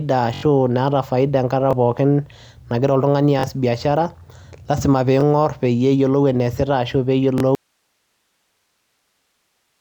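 Repeated buffers occur at 0.34 to 0.43 s (four extra plays), 1.71 to 1.73 s, 3.39 to 3.44 s (two extra plays), 5.21 to 5.23 s and 7.38 to 7.40 s. Each time, a 21.3 ms block, which fits a 1024-sample buffer, replays with hard joins, heard as a short stutter or buzz.

From 7.55 s to the end there is an audio dropout to a faint residue. The speech cuts off abruptly, leaving only hiss about 50 dB below the signal level. This is likely a lost input feed with the downstream path still live.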